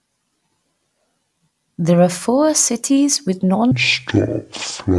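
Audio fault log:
3.71–4.99 s, wrong sample rate: the samples are clocked out at half the rate they were captured at, with no conversion, which fits 48 kHz material played at 24 kHz. The speech slows to half speed and drops 12 semitones, a full octave, sounding deep and dragged.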